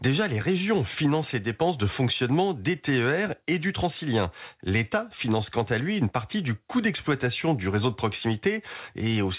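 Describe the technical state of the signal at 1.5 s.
At 1.5 s the speech is intact with no fault, and what can be heard is the normal sound of the call path, whose coding noise and absence of content above 4 kHz point to a narrowband telephone codec such as G.711 mu-law.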